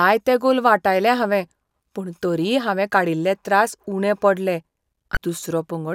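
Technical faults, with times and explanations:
5.14–5.17 s, damaged data in a compressed stream: right after "काडील्ले त्रास उणे पडले" a brief garbled blip appears as the decoder misreads corrupted frames and hunts for sync.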